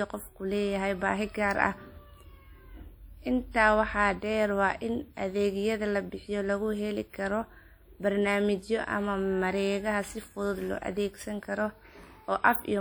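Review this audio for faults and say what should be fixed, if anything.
Across the whole speech clip there is a ringing, washy smear with a hiss that breathes with the signal, likely from WMA compression at a rate fitting about 48 kbps. Long transform blocks spread quantisation noise around each sound and zero weak detail, so a spectrogram shows blurred onsets, patchy holes between stronger lines, and nothing above 20.1 kHz. To prevent it, encode from the original source losslessly or at a much higher bitrate.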